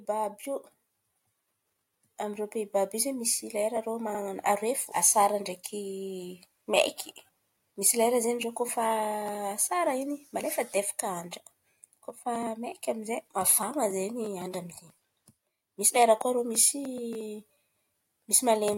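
Repeated frames at 4.14 s, after "lera rô": a 64 ms block of coded audio was sent twice, so the speech stutters briefly before "aroe fo asara" and runs 64 ms longer.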